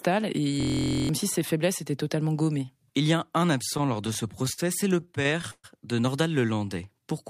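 From 0.60 to 1.09 s there is a system hang loop. The computer or audio driver stopped supplying new data while the sound hardware kept replaying the same stretch of its ring buffer. The loop is 23.2 ms long, which fits a 1024-sample buffer, and it repeats 21 times. Because the loop is so short, it sounds like a steady buzz at about 43 Hz instead of a stutter. About half a second of the speech that should have played here is lost.

Between 3.77 and 5.66 s come repeated stalls, heard as stutter. Packets arrived late or more slowly than they were being played, so the jitter buffer ran dry 18 times. At each stall the receiver kept the last sound going until fresh data arrived. The longest wait was 130 ms. These fills add up to 342 ms, about 18% of the stretch. Nothing is missing, but the speech drags and stumbles.

From 6.40 to 6.67 s there is a jitter buffer slow-down. The buffer was either running low or had just raised its target delay. 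To build a reserve, the receiver repeated single pitch periods or small pieces of pauses many times in a row, adding 46 ms. The speech plays at about 86% speed with its pitch unchanged, so the sounds in this stretch are drawn out.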